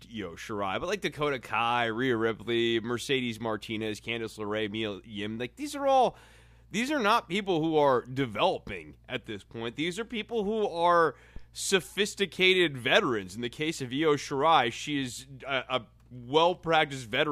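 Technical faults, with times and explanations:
11.36 to 11.49 s, phantom power thump: a supply switched on or off on the live input sends a step through the coupling capacitors, heard after "are people who are" as a deep thump peaking at about -30 dBFS, decaying within 28 ms before "sophisticated veterans".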